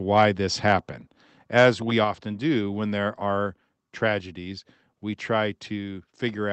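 At 1.02 s the speech drops abruptly by about 2 dB, and at 2.04 s, just before "do when there are", it drops again by about 4 dB. Both steps are likely a microphone volume stepped down by the call software's automatic gain control, each cutting the input level in a single move. On a waveform the envelope shrinks instantly at each point and stays lower; a spectrogram shows every band dimming together, with the call codec's band limit near 8 kHz unchanged.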